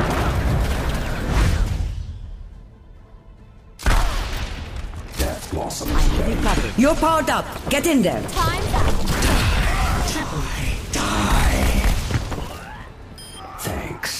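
Sample clock jitter runs through the whole clip. The converter's clock wanders by a few microseconds, so each sample lands slightly off its proper instant, and the resulting error scales with how steeply the waveform is changing. That leaves a grainy hiss sitting roughly 30 dB under the signal, swelling on loud, bright passages and falling away in quiet gaps. A spectrogram shows a diffuse noise haze tracking the signal's energy, densest at high frequencies, absent between sounds.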